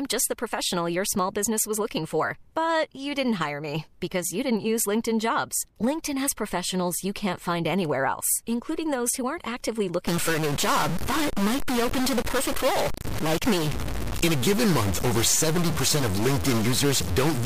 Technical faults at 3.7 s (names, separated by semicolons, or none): none